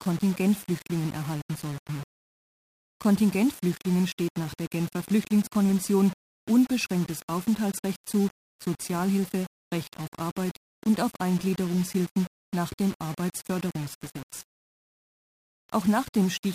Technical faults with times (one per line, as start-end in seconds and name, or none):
0.00-16.54 low bit depth without dither